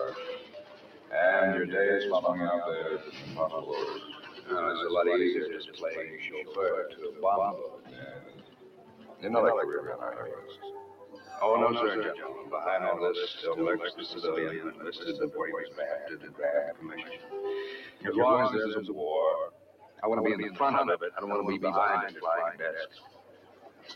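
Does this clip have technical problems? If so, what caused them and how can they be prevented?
Yes. A doubled audio track runs throughout: a second full-band copy trails by about 150 ms, roughly 5 dB quieter, with no room colour, likely from a slower capture path recorded alongside the main one. Monitor or record only one path.

A noise suppressor applied to music or sounds is active throughout, treating sustained material and tails as noise and swinging the level by around 15 dB, so the sound pumps and thins. Disable speech-oriented suppression for non-speech sources.

Sound cut by the noise suppressor occurs at 0.39–1.13 s, 2.98–3.35 s, 3.96–4.5 s, 5.62–9.24 s, 10.37–11.3 s, 15.67–18.04 s, 19.5–20.03 s and 22.87–23.93 s. Sustained and decaying parts sink by about 8 to 11 dB while attacks survive. Turning the suppressor off prevents these drops.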